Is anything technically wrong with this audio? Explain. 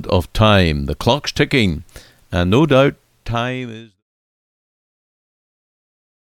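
No, nothing's wrong here; the only change you'll hear is a smooth fade-out, starting around two and a half seconds and finishing at 4.03 s, which tapers the level down gently the way an editor would, with no click or hard edge.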